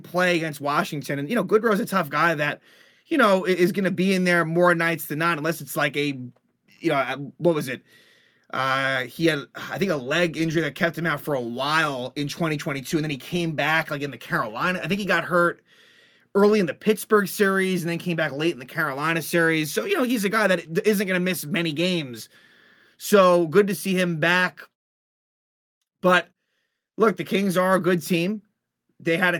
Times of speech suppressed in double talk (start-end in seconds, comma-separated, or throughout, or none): none